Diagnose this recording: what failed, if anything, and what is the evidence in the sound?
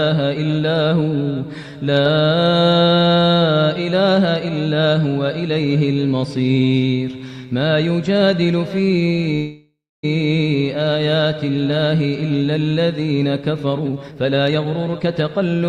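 A call audio freeze interrupts the sound from 9.35 to 10.05 s. The last sound is stretched into a fading buzz or hiss, followed by roughly 260 ms of silence, and the audio then resumes where it stopped, with nothing lost. The whole gap is 0.68 s, and that much extra delay remains afterward. The cause is likely network packets held up until the jitter buffer ran dry. On a spectrogram this looks like smeared, static bands decaying into a blank strip. The waveform shows a tapering plateau, then a near-flat silent stretch.

A jitter buffer speed-up runs from 13.70 s to 15.63 s. The sound plays at about 131 % speed while keeping its pitch, and it sounds hurried. The receiver's buffer had overfilled, so it repeatedly cut out short pitch-period slices, removing about 0.7 s of audio to reduce latency. On a spectrogram, harmonics stay at the same frequencies but events crowd closer in time. The waveform shows compressed, periodically spliced cycles with no pitch shift.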